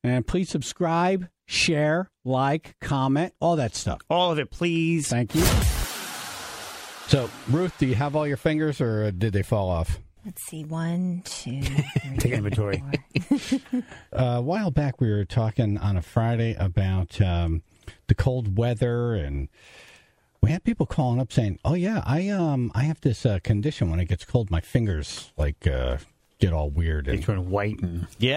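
Nothing technically wrong can be heard in this audio. No moment stands out as a fault, so there are no times or causes to report.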